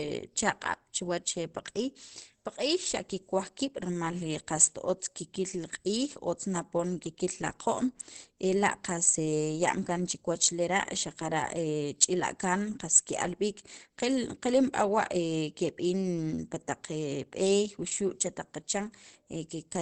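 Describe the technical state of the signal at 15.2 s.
At 15.2 s the speech sounds muffled and hoarse, with nothing above about 8.4 kHz, as it does across the whole clip. This is likely Opus compression in its speech (SILK) mode at a low rate, consistent with about 16 kbps, which narrows the band and roughens the sound.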